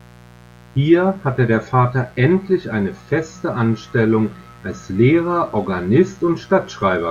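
From start to finish there's a mains buzz sitting under the speech, a steady, raspy drone that never lets up. It's built on 60 Hz, but it isn't a smooth hum: sharp switching spikes, twice per mains cycle, leaked in, likely through a dimmer, a rectifier or a missing shield, and they stack up harmonics well into the kilohertz range. That's where the gritty edge comes from. It sits roughly 25 dB below the speech.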